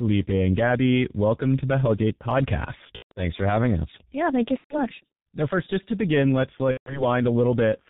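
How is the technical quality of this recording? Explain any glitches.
Quality's pretty rough, honestly: heavy low-bitrate telephony coding all the way through, plus three short dropouts.

The whole clip carries G.723.1 codec damage. Nothing comes through above 4 kHz, so the speech is muffled and hoarse, with smeared consonants. The coarse 30 ms frames and heavy damage fit its 6.3 kbit/s mode.

VoIP packet loss concealed by the speech codec hits at 2.96–3.12 s, 4.58–4.82 s just after "thank you", and 6.71–7.05 s just after "just to begin let's". The decoder patched the gaps by extending its last pitch and filter, so you hear a buzzy, fading smear. The gaps fit about four or five lost 30 ms frames, and the voice stays weak for a moment after each.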